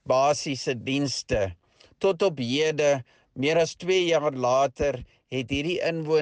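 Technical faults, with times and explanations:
No technical faults can be heard in the clip.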